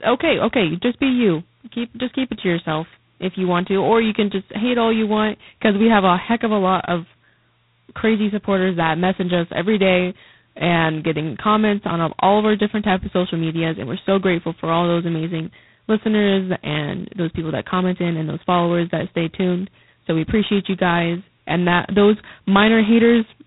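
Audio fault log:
Throughout: G.726 ADPCM, heavy damage; a harsh, rasping hiss tracks the speech level, fitting 16 kbit/s coarse prediction-difference coding, with nothing above 3.9 kHz.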